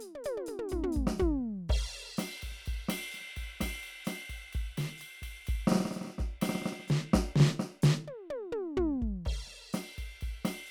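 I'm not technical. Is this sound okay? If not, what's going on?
Yes, this sound is okay, and nothing is going wrong with the music.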